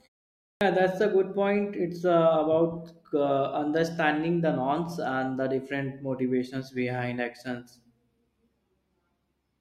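Speech that opens abruptly: at 0.5 s, after half a second of silence, the words "that's a good point" burst in with their first sounds missing. This is a clipped start after a pause: the output device slept through the silence and took about 110 ms to wake.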